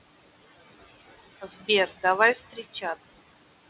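Noise suppressor artifacts run throughout. The room noise, sitting about 15 dB below the speech, is pulled down by about 18 dB between phrases and swells back under them. On a spectrogram the noise floor pumps in step with the speech and breaks into speckles, all beneath a hard empty ceiling at 4 kHz from the narrowband call path.

From 2.35 to 2.84 s comes speech cut by the noise suppressor. Around a fifth of a second of quiet speech is mistaken for noise and dropped by up to about 17 dB, sounding swallowed. The waveform envelope sags there, and the spectrogram shows those speech traces fading into the gated floor.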